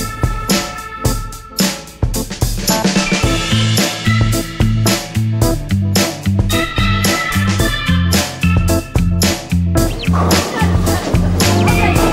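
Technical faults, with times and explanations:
No technical faults can be heard in this clip.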